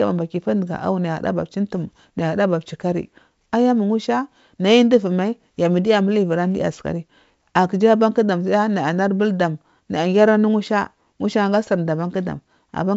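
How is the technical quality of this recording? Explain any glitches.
No glitches to report: the speech comes over G.722 wideband telephone coding at 64 kbit/s, with nothing above about 7.7 kHz and at most faint traces of the coding.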